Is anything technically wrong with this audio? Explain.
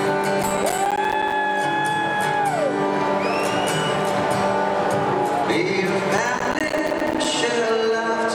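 Yes. From 0.43 to 1.32 s and again from 6.18 to 7.25 s, a gritty crackle tears through the sound. This is processor overload crackle: the processor missed dozens of deadlines on buffers of a few milliseconds, each miss leaving a hard-edged silent gap.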